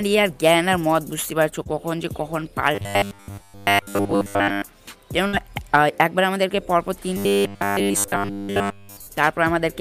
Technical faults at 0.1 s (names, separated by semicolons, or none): none